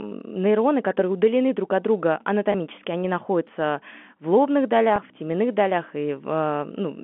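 At 2.52 to 2.54 s, after "удалены друг от друга", and at 4.96 to 4.98 s, after "они находятся в лобных", a 20 ms packet goes missing, and the receiver repeats the last pitch period to fill the gap. Each packet loss with pitch repetition sounds like a brief held, buzzy tone.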